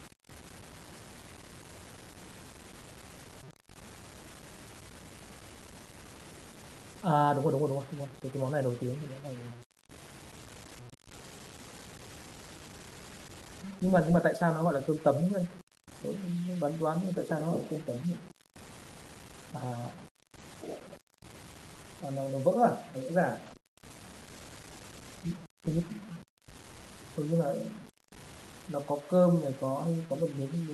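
A gritty, grainy roughness sits on the speech from start to finish, tracking the level and coarsest in the quiet passages, with noise about 20 dB below the signal. This low bit depth without dither is likely from truncation to very few bits, which fits a 6-bit signal.

At 20.36 s, and again from 23.46 to 23.56 s, the speech turns briefly rougher and noisier without any gap. Each time a lost packet was rebuilt from error correction: the decoder played the lower-bitrate copy carried in the following packet, covering one 20 ms frame first and about 60 ms across three packets second.

Right after, at 23.58 s and 23.62 s, come two quick smeared blips ending by 23.66 s. Each is a short concealed packet loss: 20 ms of audio never arrived, so the decoder extended the preceding sound to fill the hole and blended back into the real signal.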